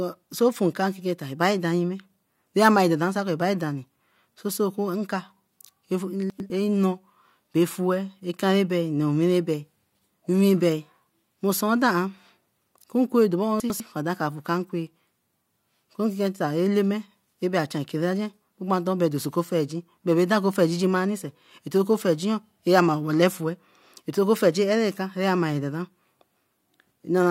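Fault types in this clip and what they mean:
chunks out of order: Twice the speech briefly turns jumbled, a garbled stutter, at 6.3 to 6.5 s and again at 13.6 to 13.8 s, just before "afue kan nkwe". In each spot, two neighbouring 100 ms chunks play swapped. One chunk came through late, one chunk behind, so the chunk after it sounds first. No audio is lost, but the wrong order leaves three hard joins where the waveform jumps.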